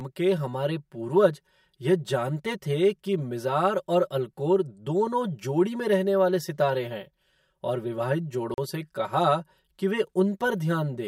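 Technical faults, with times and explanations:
Throughout, channel delay (comb filtering): one side lags by around 5 ms, so summing to mono carves evenly spaced notches from roughly 100 Hz up, making the speech hollow and phasey.
8.54 to 8.58 s, block of digital silence: just after "सितारे हैं और विवाहित" the audio drops to silence for 40 ms, cutting out and back with no fade.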